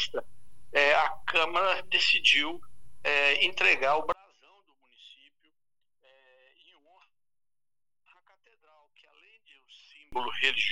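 From 4.12 s to 10.12 s the level falls by about 35 dB, leaving only a faint residue. The likely cause is one channel inverted: one stereo channel's polarity is reversed, so the content common to both channels cancels when summed to mono.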